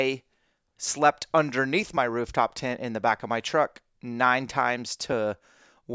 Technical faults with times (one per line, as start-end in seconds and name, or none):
none